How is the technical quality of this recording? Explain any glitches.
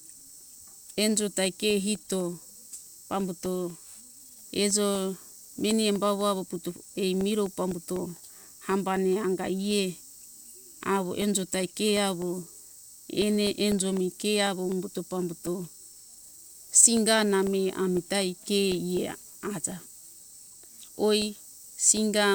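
The recording has one recurring glitch. From 0.21 s to 22.22 s, periodic USB or driver dropouts occur every 0.25 s: a background task stalls the audio path, briefly silencing roughly a millisecond, heard as regular ticks during speech.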